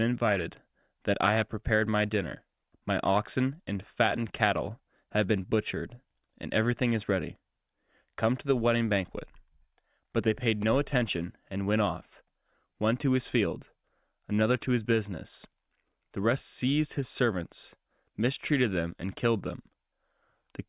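Nothing stood out on listening to this speech recording.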